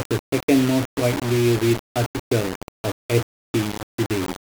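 Speech runs through a coarse, grainy distortion from start to finish. The grit rises and falls with the voice, thickening on quiet passages, where the softest parts sputter or drop out rather than fading smoothly. The error sits only about 10 dB below the speech. The likely cause is low bit depth without dither: the signal was rounded to very few levels, which fits a 4-bit resolution. With no dither to decorrelate it, the rounding error tracks the waveform and becomes audible distortion.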